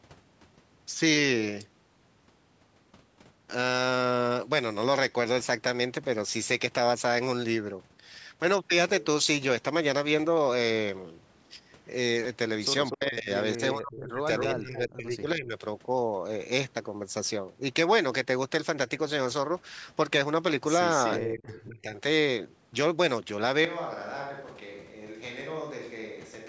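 Speech clip with short bursts of echo leak at 12.85–12.94 s, 14.38–14.44 s, 21.05–21.13 s and 21.55–21.61 s, where a delayed copy of the voice comes back about 243 ms behind it, at roughly 10 dB below the speech in the first two and lower in the last two, around 15 and 25 dB down. That delay and level are consistent with a loudspeaker on the far end whose echo canceller likely failed to remove all of what its microphone picked up. Speech suppressed in double talk follows closely: the voice dips and breaks up at 12.94–13.3 s, 13.56–14.28 s, 14.46–15.56 s and 21.18–21.97 s, with drops of around 25 dB, 30 dB, 15 dB and 25 dB respectively. The pattern points to the same canceller being unable to tell its own talker from the returning echo while both sides spoke, and attenuating everything, so the near voice is pushed down along with the leak. From 23.65 s to the end the sound changes abruptly to a hollow, roomy quality with thinner bass, a level about 10 dB lower, and room noise sitting around 30 dB below the speech. 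This is a switch to a distant microphone, most likely because the close microphone's signal dropped out and a farther pickup, such as a camera microphone, took over for the rest of the recording.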